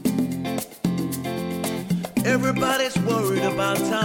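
No technical faults are audible anywhere in this audio.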